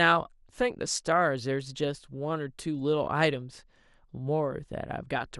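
Heavy MP2 compression, likely at a rate around 80 kbps, is starving the upper sub-bands of bits, so the speech sounds dull throughout, with gurgling, granular distortion. From 3.34 to 3.43 s, DAB burbling appears: bit errors at a small fraction of a percent slip past error correction, corrupting samples across what sounds like about four frames and producing brief blips of noise in single sub-bands.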